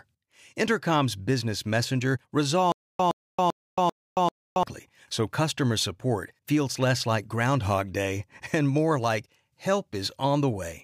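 Right after "business messenger", from 2.72 to 4.63 s, the speech turns into a stutter with silent gaps: a 117 ms fragment plays five times, each followed by about 275 ms of dead digital silence, repeating every 392 ms. The likely cause is a stalled player or stream that replays its last buffer on each retry and then runs dry. Unlike a plain dropout, the same burst keeps returning. Speech resumes at "so customer support feels", and the audio from the stall is missing.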